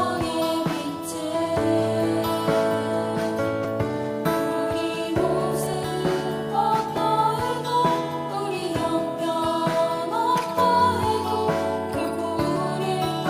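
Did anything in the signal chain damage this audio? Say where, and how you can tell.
Yes. At 3.65 s, 5.74 s, 6.98 s and 12.57 s the sound jumps forward with no gap, losing around 40 ms at the first and last and around 20 ms at the other two. This is likely a dropped buffer (overrun) at the driver or buffer stage: capture fell behind, the hardware overwrote unread samples, and the audio on either side was spliced straight together.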